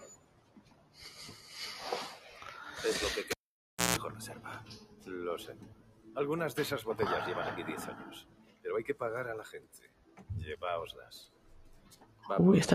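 A speech-tuned noise suppressor has been left on across this audio, treating steady tones and tails as noise, so the level pumps with swings of roughly 15 dB. You can hear it cutting sound hardest at 0.0–1.48 s (about 14 dB down), 8.22–8.65 s (about 14 dB), 9.57–10.27 s, 10.99–11.52 s (both about 13 dB) and 11.75–12.25 s (about 11 dB), with lighter dips at 2.18–2.41 s (about 6 dB) and 5.75–6.06 s (about 8 dB). At 3.31 s there's a cable pulled and plugged in: a pop, about 610 ms of near silence, then a brief 60 Hz mains buzz (around 157 ms) before it reseats at 3.97 s.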